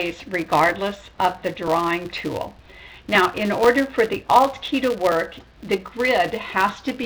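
Throughout the clip a filter restarted on every block forgets its state at each block boundary and begins from silence, leaving a small transient every 5 ms. The result is a 200 Hz buzz that rises and falls with the signal's level, unlike steady mains hum, which persists through quiet passages.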